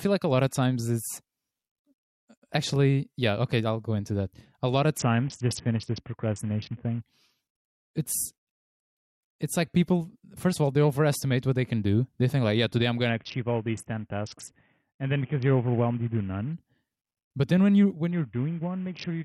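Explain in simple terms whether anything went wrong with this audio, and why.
A Bluetooth SBC bit pool drop occurs at 4.98 to 7.01 s after "lot of", 13.09 to 16.53 s after "like yeah today I'm", and 18.11 s to the end after "then when you when". Each time, the Bluetooth link squeezed the speech into far less data: the crisp high end vanishes and a gritty roughness creeps in.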